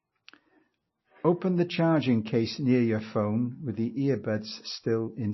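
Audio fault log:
throughout: MP3 compression, likely; nothing above 5.8 kHz, with plainly audible watery swirl that a plain low-pass lacks, which fits a bitrate near 25 kbps.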